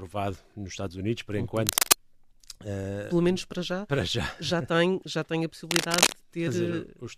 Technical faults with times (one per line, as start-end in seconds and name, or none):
1.57-1.96 cable scratch noise
5.66-6.12 cable scratch noise